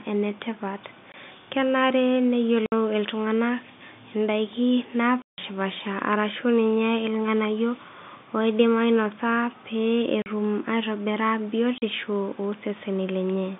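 Packet loss filled with silence chops the speech at 1.12, 2.66, 5.22, 10.22 and 11.78 s, leaving gaps of 20, 60, 160, 40 and 40 ms. Those steps fit lost 20 ms packets, and the silence cuts in and out hard.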